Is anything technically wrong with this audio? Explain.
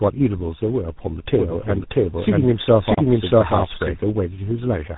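Yes, there are two faults.

Tandem speech coding runs through the whole clip. The speech is rough, muffled and warbly, with nothing above 3.8 kHz. This fits three speech codecs in a row, GSM full rate, then CVSD, then GSM full rate again. Each stage re-encodes the previous stage's already degraded output.

A doubled audio track appears from 1.39 s to 4.03 s. A full-band second copy of the speech, at about the same level, trails the original by around 0.7 s. It has no decay or room colour and cuts in and out abruptly, likely from a second, slower capture path being mixed in.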